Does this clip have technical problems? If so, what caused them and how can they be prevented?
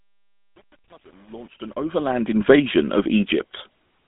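Yes. The speech carries GSM full-rate codec damage throughout: a buzzy, gravelly roughness from the pulse-driven vocal-tract model, a narrow line band of about 150 Hz to 3.6 kHz, and nothing above 3.8 kHz, which fits the 13 kbps full-rate coder. Preventing it means carrying the call on a wideband codec or recording locally instead of over the GSM link.

The fade-in from 0.0 to 2.45 s shows truncation distortion on a fade. The gain stage keeps only about 9 bits without dither, so the quiet start turns to gritty steps, worst from 0.0 to 2.11 s. Preventing it means running fades at full word length and applying dither before any reduction in bit depth.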